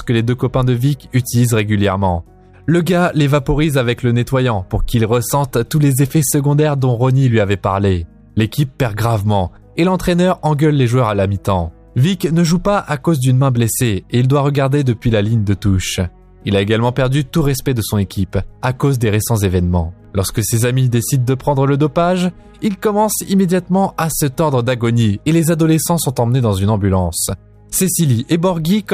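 No technical faults are audible anywhere in this audio.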